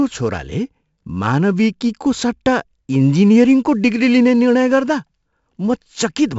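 Speech, with heavy 4-bit ADPCM compression throughout. Gritty hiss rides every loud syllable. Nothing reaches above 7.7 kHz, which fits a 64 kbps stream.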